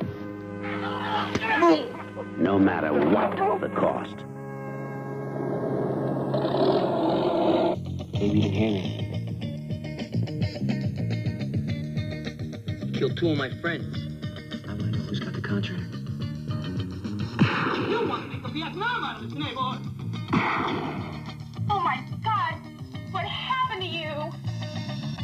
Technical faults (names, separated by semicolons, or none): channels drifting apart